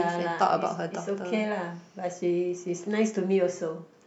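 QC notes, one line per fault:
No faults heard in this speech clip; nothing to flag.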